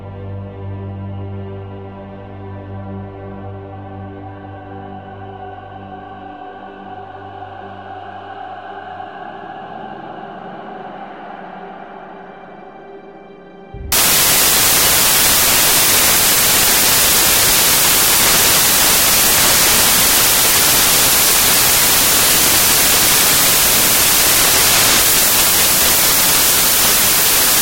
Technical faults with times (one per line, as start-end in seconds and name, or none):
13.92-27.62 samples built from the wrong bytes